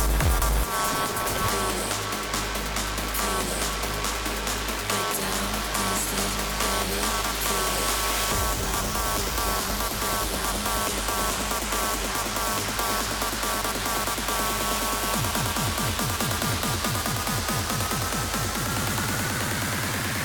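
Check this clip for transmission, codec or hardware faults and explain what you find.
One fault runs through the whole clip: a block size mismatch (padded). Each stage writes shorter blocks than the next reads, so zeros fill the remainder, which fits a 512-sample read block. The result is an 86.1 Hz buzz and playback slowed to 0.938 times normal speed at roughly normal pitch. The waveform shows regular tiny dropouts. A spectrogram shows thin vertical gaps and harmonic lines at 86.1 Hz multiples.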